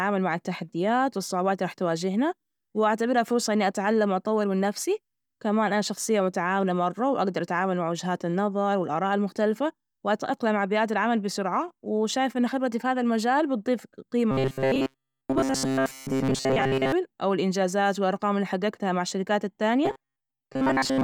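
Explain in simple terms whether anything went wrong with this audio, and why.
Two stretches of the speech turn robotic, from 14.31 to 16.92 s and again from 19.85 s to the end. That's robotic sound from repeated short buffers: the voice becomes a stiff, metallic buzz pitched at 133 Hz. The likely cause is new audio arriving too slowly, so the player keeps looping the last sliver, about 7.5 ms long, and skips most of the real sound. The speech still roughly follows its shape.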